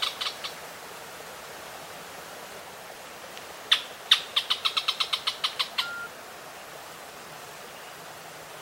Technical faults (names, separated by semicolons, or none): doubled audio track